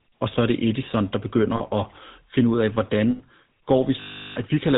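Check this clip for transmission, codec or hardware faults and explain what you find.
The speech has passed through the GSM full-rate codec from start to finish, and two short runs of lost GSM frames interrupt it.

Across the whole clip, the codec damage is plainly audible. Everything above 4 kHz is gone, and the voice carries a buzzy, gravelly grain. That grain comes from the codec rebuilding the excitation from a sparse train of regular pulses, which fits the 13 kbps full-rate mode. A plain narrowband telephone filter would dull the top end in the same way, but it would leave the voice smooth. The roughness here is what identifies GSM.

The lost GSM frames fall at 1.56 to 1.61 s, just before "at finde ud af", and at 3.10 to 3.21 s, just after "at finde ud af". In each gap the decoder repeats the last good frame instead of going silent. The first gap lasts 40 ms, which fits two lost 20 ms frames. 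The second lasts 100 ms, which fits five. Both come out as a brief rough, metallic ring, longer on the second. That ring separates them from a simple dropout, which would leave a hole or a click.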